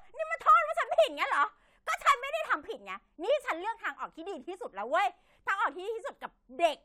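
Nothing in this bit of speech stands out as a technical problem, so there's really nothing here to point to.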